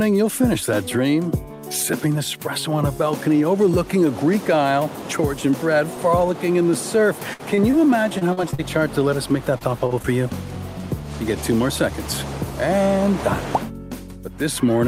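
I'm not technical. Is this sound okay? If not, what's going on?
No, there's a rough patch between about 7.3 and 10.1 s where bits of the sound never arrived in time, and the receiving end had to paper over the holes.

First comes a burst of packet loss from 7.33 to 7.41 s. About 60 ms went missing in one go, so the receiver kept stretching the last bit of sound and letting it fade. You'll hear a brief held buzz or dying hiss, then the audio picks up a little further along with that slice gone.

Around it are several cases of short concealed packet loss, at 7.55–7.59, 7.71–7.75, 9.58–9.63, 9.87–9.92 and 10.02–10.06 s. Each hole is only about 20 to 40 ms, and the receiver filled it by continuing whatever came just before, then blending back in. These come across as quick smears or wobbles, and a very short sound can disappear entirely.

The worst stretch is repeated packet loss (robotic sound) from 8.19 to 8.60 s. 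Four separate gaps landed close together, adding up to about 120 ms lost, the longest about 40 ms. Because each patch barely finishes before the next hole arrives, that stretch sounds choppy, with pieces missing.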